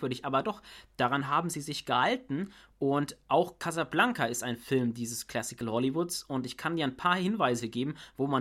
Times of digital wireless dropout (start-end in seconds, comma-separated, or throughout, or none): none